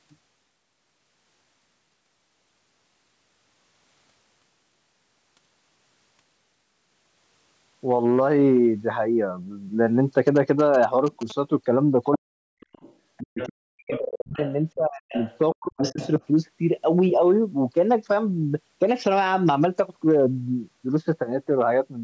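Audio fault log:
10.27–11.32 s, GSM signalling bursts: a galloping dit-dit-dit of short buzzes repeating at about 217 Hz, sitting roughly 15 dB below the speech. A nearby 2G phone is signalling with short groups of radio bursts, as happens before a call or text arrives. The audio circuitry rectifies the radio energy, so the burst timing becomes an audible buzz that rides on top of the recording for just over a second.
12.15–12.37 s, 13.23–14.40 s, 14.75–15.17 s and 15.54–16.00 s, speech suppressed in double talk: the voice drops away in pieces, by about 40 dB at the deepest point, in stretches lasting from around a fifth of a second to about a second. The likely cause is the echo canceller. Sound from the far side was playing on the loudspeaker while this side talked, the canceller could not tell the local talker from the loudspeaker echo, and it turned both down.
12.60–13.50 s, 13.92–14.53 s and 15.14–16.25 s, other side's voice leaking through: a second voice appears underneath, about 15 dB below the main speech, in stretches of roughly half a second to just over a second that overlap the suppressed passages. 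This is likely residual echo. The device plays the other side on a loudspeaker, and the echo canceller did not remove all of that sound from the microphone pickup, so scraps of it come through in the recording.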